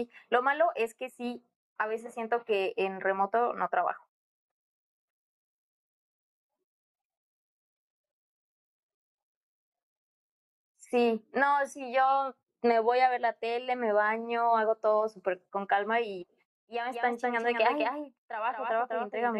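Speech, with a doubled audio track from 16.92 s to the end. A second full-band copy runs about a fifth of a second behind, a few decibels quieter. It has no decay or room colour and cuts in abruptly. It is likely a second, slower capture path mixed in.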